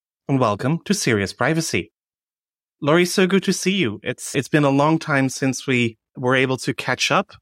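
No technical faults can be heard at any point in the speech. There is no moment in the recording that calls for a time or a value to be noted.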